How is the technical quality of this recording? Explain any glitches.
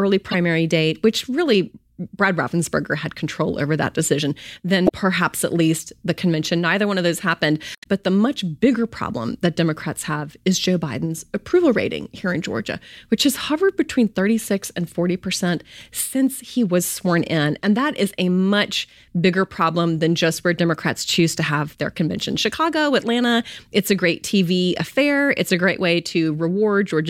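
The speech recording has three short faults from damaged data in a compressed stream, at 0.31 to 0.35 s (just before "date which really"), 4.85 to 4.92 s (after "control over that decision"), and 7.75 to 7.86 s (after "one of those happened"). Corrupted frames throw the decoder off until it resyncs, leaving brief chirps, squawks, clicks or short holes that show as broadband smears or blocky, disjointed patches on a spectrogram.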